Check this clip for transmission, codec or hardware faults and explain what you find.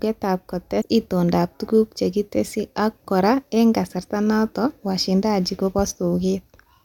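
One fault is present: compressed frames skipped. From 0.82 to 0.84 s, just before "itondoab tuguk chekitesyi ak", whole frames were lost or rejected, so the speech jumps ahead by about 150 ms, roughly four 32 ms frames.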